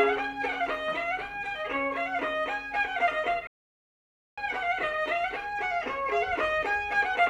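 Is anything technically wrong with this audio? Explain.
Yes, there is one fault. A playback stall runs from 3.47 s to 4.38 s, a gap of about 0.90 s. The sound is cut off partway through and the output drops to complete silence for nearly a second before the audio returns. The likely cause is the player running out of buffered data, or its playback thread being held up, so nothing reached the output until it recovered and began feeding samples again.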